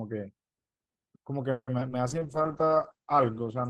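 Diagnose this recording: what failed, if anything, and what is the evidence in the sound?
The network dropped packets repeatedly between 1.51 and 1.92 s: four gaps, the longest about 160 ms. That is repeated packet loss (robotic sound). The receiver patched 190 ms by extending the last sound, leaving 80 ms missing outright, so nearly half that stretch sounds choppy.

From 2.07 s to the end there is a call bitrate drop. Bandwidth estimation fell and the Opus encoder went from 40 to 9 kbps, holding the lowest rate for about 1.3 s. Coding became coarser, and at the low rate the encoder also narrowed the band from 20 kHz to 8 kHz, so the speech turns muffled and rough.

At the receive buffer, a jitter buffer slow-down ran from 2.19 to 2.43 s. To build up a reserve, the receiver repeated single pitch periods to add 45 ms, so the audio plays at about 85% speed without a change in pitch. Sounds there are audibly drawn out.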